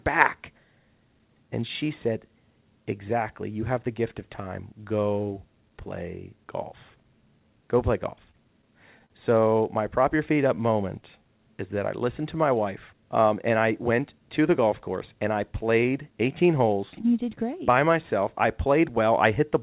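Speech heard through a narrowband call path, with nothing above 4 kHz, consistent with G.711 mu-law at 64 kbps. Repeated stalls (stutter) run from 8.16 to 9.12 s: packets arrived late, the jitter buffer emptied five times, and the receiver stretched the last sound across each gap, the longest 41 ms, for 100 ms in all, about a tenth of the span, so nothing is lost but the speech catches and drags. A jitter buffer slow-down follows from 10.00 to 11.23 s, just before "is that I listened": to rebuild its reserve the receiver repeated single pitch periods, adding 103 ms and playing at 92% speed with pitch unchanged, so syllables sound drawn out. A jitter buffer speed-up runs from 13.34 to 14.29 s, between "listened to my wife" and "to the golf course": with too much audio queued, the receiver cut out short pitch-period pieces, about a tenth of a second in total, and the speech runs at 108% speed and sounds hurried.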